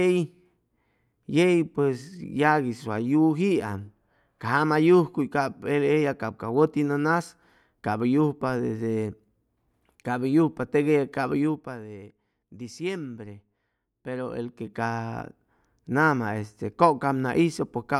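A speech clip with zipper noise on two level moves: a drop of about 10 dB from 11.33 to 11.84 s and a rise of about 10 dB from 14.05 to 14.88 s. The gain jumps in small unsmoothed steps, around 40 a second, each adding a click, so a fast ticking rides on the voice.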